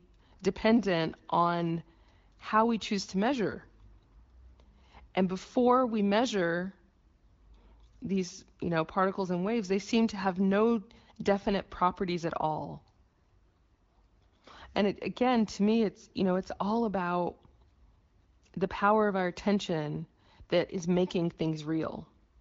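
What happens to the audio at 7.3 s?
Nothing goes wrong at 7.3 s: the speech continues intact through that moment, carried by the AMR wideband (HD Voice) codec at 15.85 kbit/s with only light coding damage.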